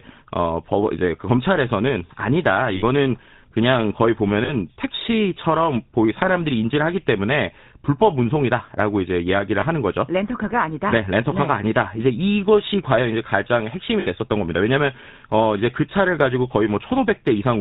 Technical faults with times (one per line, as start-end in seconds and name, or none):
0.00-17.60 GSM full-rate codec
2.76-2.83 lost GSM frames
4.44-4.50 lost GSM frames
9.60-9.65 lost GSM frames
14.00-14.07 lost GSM frames